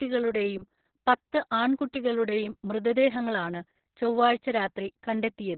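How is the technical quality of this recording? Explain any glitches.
Pretty rough, honestly. Heavy Opus voice compression runs the whole way through. The linear-prediction coder has cut everything above about 4.3 kHz and coarsely coded the excitation. That leaves the speech muffled, hoarse and slightly robotic, which fits narrowband mode at something like 6 kbps.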